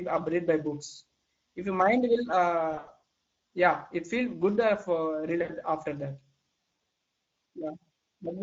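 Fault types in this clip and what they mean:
Speex codec: Throughout the clip, this CELP speech codec leaves the speech audibly hoarse and noisy because too few bits are left to code the excitation signal. The degree of damage points to a middle-quality setting, which fits roughly 17 kbps.
VoIP packet loss concealed by the speech codec: At 2.71–3.02 s, about 180 ms of audio is lost in gaps up to 80 ms, and at 5.41–5.51 s a further 80 ms is lost. The decoder stretches the last pitch and filter into a fading buzzy tone or coloured noise, and the speech stays weakened briefly afterward.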